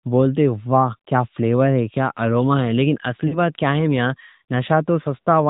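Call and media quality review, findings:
Throughout: band-limited, buzzy, somewhat synthetic speech with nothing above 4 kHz. Likely component is the AMR narrowband mobile codec (AMR-NB): 8 kHz sampling and a pulse-excited vocal-tract model; the coarseness fits a mid-rate mode around 10.2 kbps.

3.28–3.36 s, just before "بات کیا ہے میاں": brief smeared, drawn-out sound fading down, then a rough restart. Lost AMR speech frames: about 40 ms, fitting two frames. The decoder repeats the last pitch and vocal-tract settings at falling gain.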